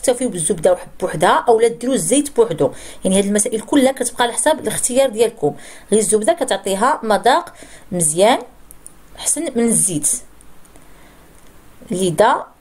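No technical faults can be heard at any point: the signal keeps its level and continuity, with nothing in it that points to trouble in capture, transmission or playback.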